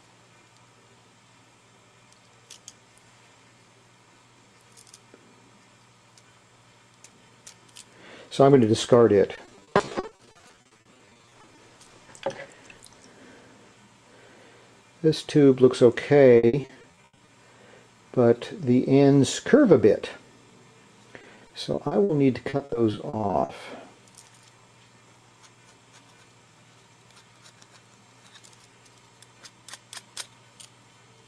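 Repeated packet loss (robotic sound) occurs at 9.35–11.59 s, 16.37–17.29 s, 21.21–22.11 s and 22.49–23.51 s. Missing audio is patched by prolonging the last fragment, in holes up to 80 ms, giving choppy sound with pieces missing. Spectrograms show blocky, repeated vertical slices.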